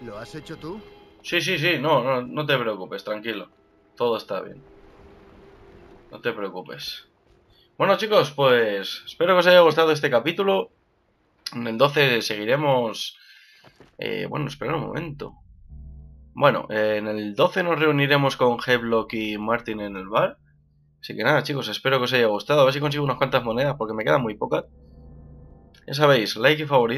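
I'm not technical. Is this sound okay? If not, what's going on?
No. Throughout, there is imaging from linear upsampling. The sound was made at 16 kHz and stretched to 44.1 kHz by simply joining the dots. The top end sounds dull. A faint metallic shimmer sits between 8 and 16 kHz.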